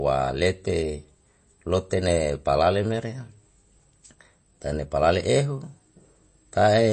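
Throughout, plainly audible MP3 compression sounds watery and swirly. A spectrogram shows a flat ceiling at 8.3 kHz, likely from a bitrate near 32 kbps.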